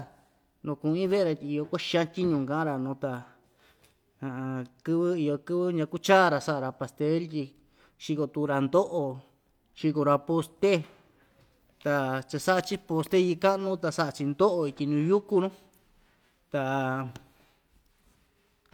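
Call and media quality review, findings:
No call or media quality findings to report for this speech recording.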